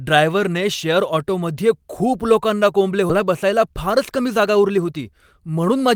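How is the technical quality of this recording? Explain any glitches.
Two timing faults affect the recording, both in the second half of the speech.

Skip ahead, 3.09 to 3.11 s: roughly a second of audio is lost and the two sides are butted together with no fill. Delayed audio was likely discarded so playback could resume from later audio already queued. The result is an abrupt jump in the speech.

Jitter buffer speed-up, 3.19 to 5.73 s: the receiver, holding more audio than its target, trims pitch-period-sized pieces repeatedly to reduce delay, about 0.2 s in total. Speech runs at 108% speed with pitch unchanged, sounding hurried until the buffer settles.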